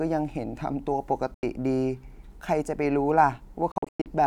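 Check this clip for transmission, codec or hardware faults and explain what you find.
Two spots where the speech drops out, most likely Bluetooth dropouts. At 1.34–1.43 s there's an 85 ms hole, and from 3.72 to 4.06 s several gaps add up to 256 ms, the longest about 107 ms. Packets missed the link, so output went silent, and the speech picks up as though it kept going underneath.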